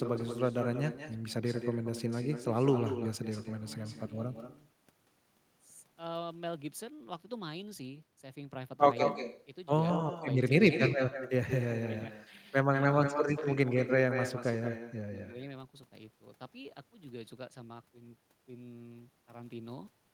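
From start to finish, every phrase is trailed about a fifth of a second later by a fainter, thinner copy, about 9 dB down. This is echo with no canceller: the far end's loudspeaker feeds its microphone, and nothing strips that returning sound.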